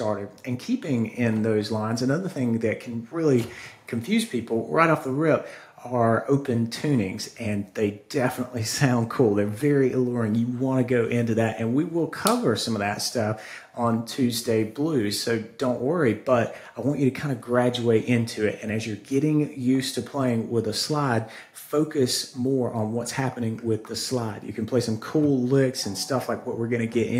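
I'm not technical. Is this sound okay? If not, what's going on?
Yes, nothing in this recording points to a technical problem with how the sound was captured, processed or delivered.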